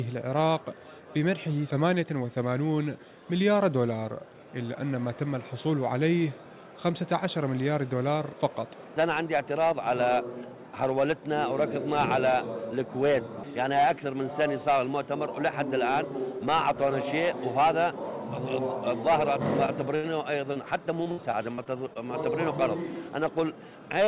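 Short concealed packet loss at 19.66 to 19.70 s: roughly 20 ms of audio never arrived in time, so the receiver stretched the preceding sound across the hole and blended back. It comes through as a brief smear or wobble.

Burst of packet loss at 19.96 to 20.05 s: about 80 ms went missing in one run. The receiver kept extending the last sound while turning it down, giving a held buzz or fading hiss before the audio picks up further along, with that stretch gone.

Short concealed packet loss again at 20.53 to 20.57 s: another roughly 20 ms hole, patched the same way by carrying the previous sound forward. It leaves a similar momentary wobble.

Repeated packet loss (robotic sound) from 21.03 to 21.97 s: six separate gaps, the longest 61 ms, add up to 160 ms missing, about 17% of that span. Each is papered over by continuing the last sound, so the passage turns choppy, with pieces missing. Throughout, the band stops at 4 kHz, which points to a G.711 A-law call codec at 64 kbps.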